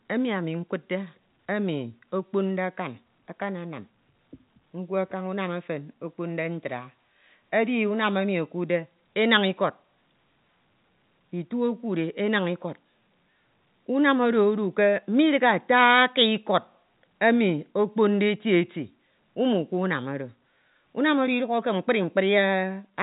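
Nothing goes wrong anywhere in this speech recording; it simply carries the narrow band of G.711 telephone coding, with nothing above about 3.8 kHz.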